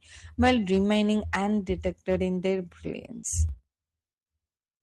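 Hard clipping runs from 0.41 to 1.35 s: the speech was driven about 8 dB past what a stage in the chain could carry, so every peak is sliced flat. Those squared-off tops add high harmonics, giving a harsh, gritty fuzz on the louder syllables.

Short concealed packet loss follows at 3.19 to 3.24 s, where about 40 ms of audio never arrived in time. The decoder papered over the gap by extending the preceding sound and crossfading back into real audio, leaving a brief smeared wobble.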